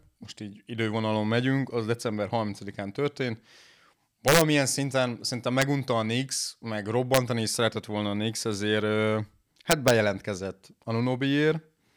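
Gain on loud speech peaks exceeded the integer range and wrapped to the opposite sign instead of limiting. This integer overflow causes harsh cracks at 4.28–4.41 s (about 4 dB over), 5.62 s, 7.14–7.17 s, and 9.71–9.90 s.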